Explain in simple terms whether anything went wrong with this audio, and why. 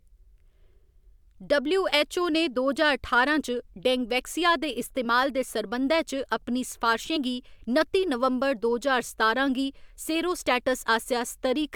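Compressed frames skipped at 5.04 s, between "डेंगवैक्सिया दे" and "दे सरबंधै", and at 7.15 s, just before "गी नत्ती नवंबर दो": each time one 23.2 ms chunk of the compressed speech went missing or was rejected as damaged, so playback jumps ahead with a brief smeared blip.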